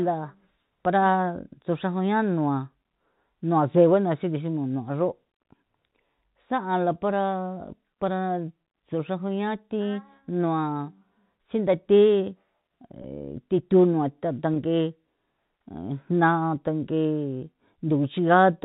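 At 13.02 to 13.04 s and again at 14.54 to 14.56 s, the speech has packet loss with pitch repetition. Each gap is about 20 ms, which fits a single lost packet. The receiver fills it by repeating the last pitch period, heard as a brief, slightly buzzy hold.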